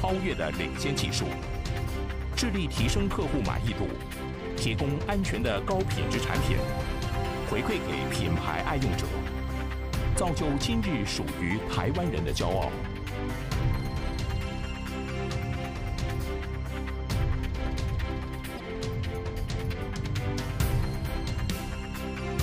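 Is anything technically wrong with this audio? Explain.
Yes. There is damaged data in a compressed stream, from about 18.54 to 18.61 s. For roughly 70 ms, part of the encoded stream is corrupt. The bytes there were lost, zeroed or overwritten. The decoder cannot read those frames correctly and loses its place in the stream. It then hunts for the next valid frame header before normal decoding resumes. The result is a short chirp or blip that breaks into the sound.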